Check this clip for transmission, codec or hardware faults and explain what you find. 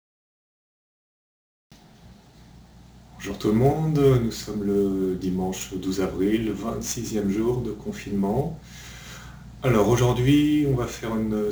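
There's one fault here, and it runs the whole way through: sample clock jitter. The converter's clock wobbles by something like 10 microseconds, so each sample lands a little early or late. Where the waveform moves fast, that timing slip turns into a sizeable error, roughly 25 dB below the signal. You hear it as a gritty hiss riding on loud, bright passages, fading out whenever the sound drops away.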